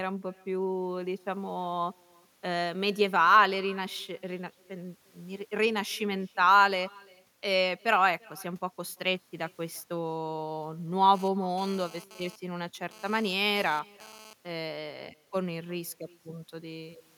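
From the start, every phrase is trailed by a faint, thin copy arriving about a third of a second later and about 28 dB down. This is echo with no canceller: the far end's loudspeaker feeds its microphone, and nothing removes the returning speech.

From 11.15 s to 14.33 s, a harsh, raspy buzz at 217 Hz, rich in harmonics and about 21 dB below the speech, cuts in and out. This is GSM phone buzz: a nearby 2G handset's intermittent data bursts are being rectified by the audio circuitry.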